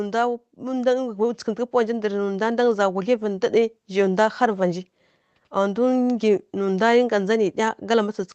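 From about 0.58 s to 3.55 s there's an automatic gain rising effect: the gain control decided the input was too quiet and kept pushing its gain up, by about 7 dB in total across those three seconds. You hear the speech and the room noise swell together, a slow lift in level rather than a jump. All of this arrives through the call codec, whose top end stops around 8 kHz, so the rising background has a dull edge to it.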